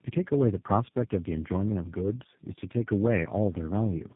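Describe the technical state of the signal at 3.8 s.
At 3.8 s the speech carries tandem speech coding, present throughout. It passed through three speech coders in a row (AMR-NB, GSM full rate and G.729A, the last fitting its 8 kbit/s character), each re-encoding the previous one's losses. Unlike a single narrowband codec, the roughness and warble stack up, over a band that stops near 3.6 kHz.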